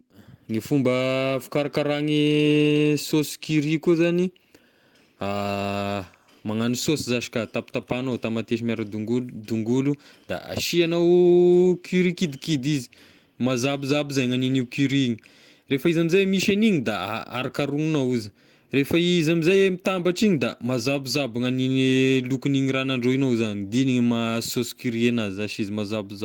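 No technical faults are audible.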